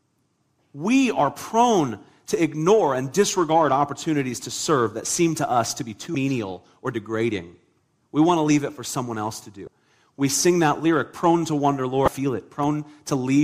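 At 6.12 s, right after "to us to be", the speech briefly breaks up. It returns at 9.64 s, between "for someone else to" and "we sing that lyric", and again at 12.05 s, after "lyric prone to wonder". Each lasts about 30 ms. This is damaged data in a compressed stream. Some bytes were corrupted, so the decoder misreads those frames and loses sync until it finds the next valid frame header.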